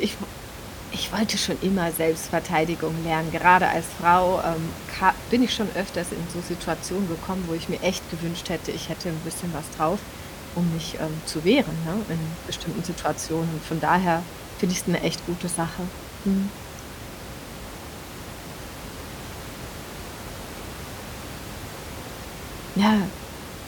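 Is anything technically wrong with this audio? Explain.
No, nothing technically wrong can be heard here.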